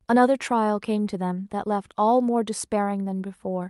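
Clock drift between sender and receiver runs through the whole clip: the sending clock is running roughly 4 percent fast, so the receiver's jitter buffer keeps overfilling. The speech gets a faintly hurried, uneven pace, and the waveform shows small seams at irregular points where buffered audio was trimmed away.

From 0.05 s to 3.62 s, repeated timing corrections keep the playback in step, running the speech at about 104 percent speed overall. Each correction drops a short slice, heard, if at all, as a slight hiccup or stumble in tempo. On a spectrogram these appear as scattered, unevenly spaced vertical discontinuities where harmonics jump abruptly. The call codec, which sounds like Opus at around 64 kbps, caps the spectrum near 12 kHz throughout.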